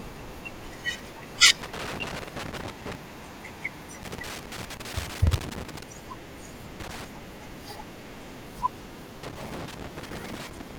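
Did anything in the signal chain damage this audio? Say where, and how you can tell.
Yes, the damage is in the analogue wiring: a worn or dirty contact somewhere in the cable path is making and breaking as it moves, producing loose connector crackle. Each time the contact opens, the speech is chopped and any DC on the line adds pops, heard as irregular bursts of scratchy crackle from 1.62 to 2.95 s, 4.03 to 5.83 s, 6.80 to 7.05 s, and from 9.23 s to the end of the clip.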